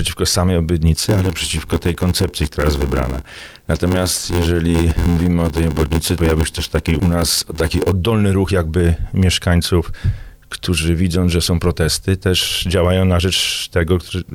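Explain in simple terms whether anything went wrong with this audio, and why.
From 0.95 s to 7.92 s the sound takes on a steady buzz, at about 86 Hz, and drags noticeably, running at roughly 0.86 of its proper speed while the pitch stays about where it should be. This is a block size mismatch (padded). One stage hands over chunks of audio shorter than the next stage expects, which fits a 512-sample block being read, and the missing part of each chunk is filled with silence. Those tiny repeated gaps create the buzz and stretch out the timing.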